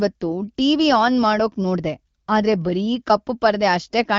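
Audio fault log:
No faults are present in this speech clip. The AMR wideband (HD Voice) codec is audible at a rate that fits 12.65 kbit/s, with speech clear and only light coding traces.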